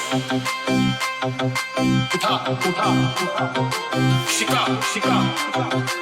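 At 2.11–2.17 s and again at 5.44–5.49 s there's damaged data in the compressed stream: the decoder hits bad frames, loses sync, and spits out a short glitch.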